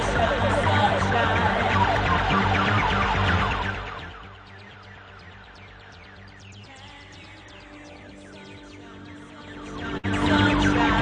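Zipper noise runs from 9.38 s to 10.31 s. A level change of roughly 25 dB is applied in 2 dB jumps at about ten per second instead of as a continuous ramp, and each jump leaves a small tick, so a stepped ticking rides on the sound as it moves. On a waveform the envelope looks like a staircase rather than a slope. A spectrogram shows faint vertical broadband lines at each step.

Inside that stretch, at 9.97 s, comes a burst of packet loss. About 61 ms of the sound is replaced by a continuation of what came just before, fading away as the gap goes on, and then playback resumes with roughly 60 ms of the original missing. A spectrogram shows a smeared, held band of energy decaying to darkness, then an abrupt restart at 10.05 s. The waveform shows the matching held-and-fading section followed by a sudden jump.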